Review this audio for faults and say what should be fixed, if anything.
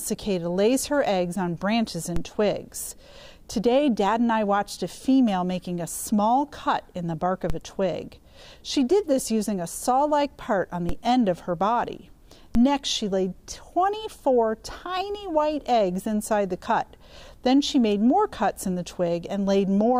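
The signal's zero line jumps suddenly four times, at 2.16, 7.50, 10.89 and 12.55 s. These are DC steps, each an offset of about -16 dBFS, such as a converter recalibrating or an offset-carrying input being switched in. Each offset then drains away through a 5 Hz high-pass, so every jump is heard as a short low thump under the sound, which carries on unaltered. Keeping converters from recalibrating mid-recording and blocking DC on switched inputs before they reach the mix would prevent it.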